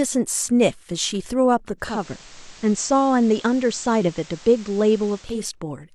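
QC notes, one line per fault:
1.77 to 5.45 s, digital radio blending to analogue: the receiver lost the digital stream and cross-faded over about 0.3 s to the FM broadcast of the same station, returning at 5.45 s. A steady hiss sits roughly 25 dB under the speech, while loudness stays level. Unlike a codec low-pass or a dropout, the change ramps in smoothly and brings FM-style hiss, then reverses.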